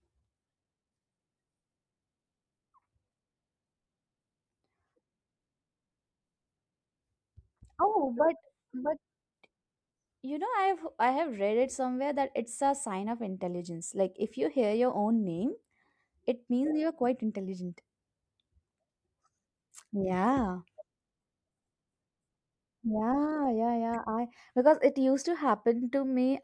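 No technical faults occur at any point in the speech, so there is nothing to describe in time order.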